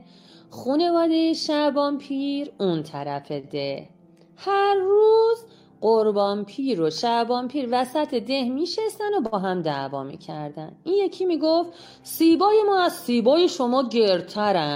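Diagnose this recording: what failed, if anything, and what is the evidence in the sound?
Short stalls from a late packet at the network stage, near 3.39 s and 9.26 s: the jitter buffer ran dry, and the last sound was held for 37 and 58 ms. On a spectrogram these show as flat, smeared bands.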